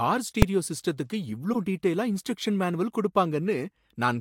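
At 0.42 s, invalid numbers at full scale produce a single loud bang. A calculation went infinite, and the output pinned at full scale for a moment fitting a 128-sample block.

From 1.52 to 1.56 s, a corrupt frame decoded puts a brief burst of noise just before "டீடெயிலா இன்ஸ்ட்ரக்ஷன் மேனுவல்". Damaged bits misplaced energy in frequency for roughly one frame, peaking around -15 dBFS.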